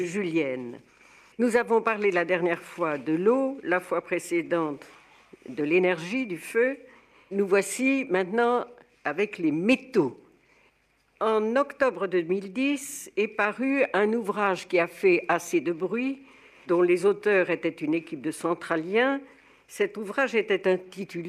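No dropouts, clicks, distortion or other transport or processing faults turn up anywhere in the recording.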